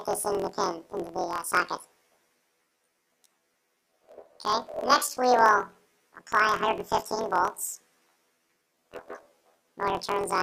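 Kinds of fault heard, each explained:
Planar audio read as interleaved: Each 24 ms block stores all its left-channel samples followed by all its right-channel samples, but the reader treats the data as alternating left-right pairs. Each block's left half, then its right half, therefore plays squeezed to double speed, an octave high, while the overall pace stays correct. The constant switching at the 41.7 Hz block rate adds a rough, robotic buzz through the whole sound.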